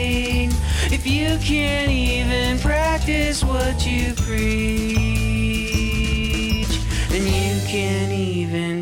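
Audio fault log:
No faults detected in the audio.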